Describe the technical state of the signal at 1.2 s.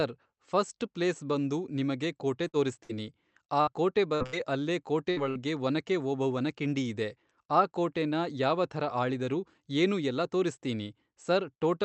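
At 1.2 s the speech comes through intact, with no dropout, glitch or other fault, only the band-limited character of the call path, whose top end stops around 8 kHz.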